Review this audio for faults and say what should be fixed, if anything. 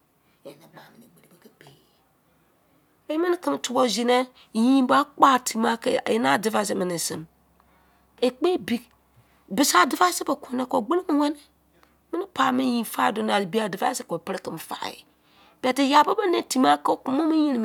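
Nothing stood out on listening to this speech recording, so there is nothing here that needs fixing.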